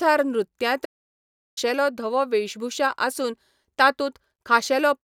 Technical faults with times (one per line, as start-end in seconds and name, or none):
0.84-1.58 playback stall